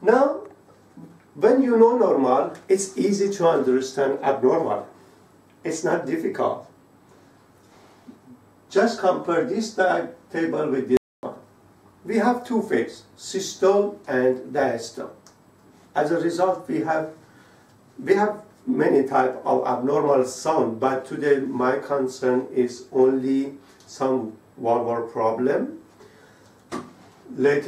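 The player likely ran short of buffered data, or had its playback thread held up, so it had nothing to send to the output for a moment. The result is a playback stall: the audio drops to silence mid-flow at 10.97 s and stays silent for about 260 ms, until 11.23 s, before carrying on. The gap is long enough to register as a clear break in continuity rather than a click.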